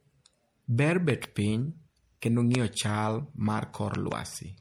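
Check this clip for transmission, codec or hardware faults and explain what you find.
Yes, there are faults: MP3 compression runs through the whole clip, loud pops occur three times, and there is one pre-echo.

MP3 compression is plainly audible from start to finish as a watery, swirly texture on the speech, with nothing above 20.5 kHz. The likely cause is MP3 encoding at a low bitrate, around 64 kbps. Weak frequency components are dropped and return from frame to frame, and the top of the band is cut off at a fixed point.

Loud pops are sharp pops heard on top of the speech, which carries on underneath. There are two pops between 1.10 and 1.26 s, at about 15 dB above the speech, just before "piny kendo". A single pop at about 20 dB falls at 2.55 to 2.57 s, just after "piny kendo". Two more, at about 10 dB, occur between 3.95 and 4.14 s. They are likely voltage steps or pulses added to the signal, from a plug, a switch, static or a driver glitch.

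The pre-echo at 2.20 s is a short hiss spread over about 18 ms just ahead of an attack, which sounds soft and smeared. The codec spreads its quantisation noise evenly across a block, so noise sized for the loud onset also fills the quiet moment before it.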